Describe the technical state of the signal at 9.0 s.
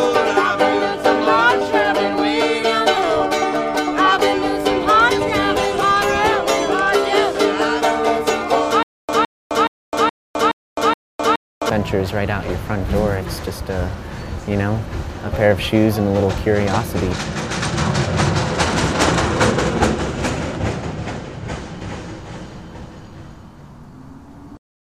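At 9.0 s the playback or stream has likely stalled and keeps retrying, producing a stutter with silent gaps from 8.83 s to 11.70 s. A 163 ms fragment repeats six times, each followed by about 259 ms of silence, every 421 ms, and the intervening audio is lost.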